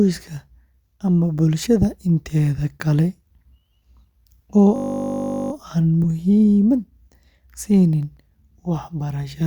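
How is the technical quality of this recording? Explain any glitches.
Technical quality is compromised by three distinct kinds of fault, all in the second half of the speech.

From 4.76 to 5.52 s there is a system hang loop. The host or driver stalled while the sound hardware kept replaying the same 20 ms stretch of its ring buffer, 38 times over. Because the looped segment is so short, it repeats at 50 Hz and comes across as a steady, rough buzz rather than a stutter. Little or no audio appears to be lost; the speech resumes where it left off.

A corrupt frame was decoded at 6.04 s and again at 8.98 s. In each case a single compressed frame carried damaged bits that the decoder played anyway. The misread codes and gains put energy in the wrong frequency bands for roughly one frame's duration, giving a brief synthetic blip or chirp that bears no relation to the surrounding speech.

Between 8.03 and 8.31 s there are three CD scratch ticks. 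A surface blemish destroyed more data on successive rotations than the error correction could rebuild, so the player concealed the bad samples each time. The result is three small, evenly spaced clicks, the longest about a millisecond, with the gap between them matching the disc's rotation.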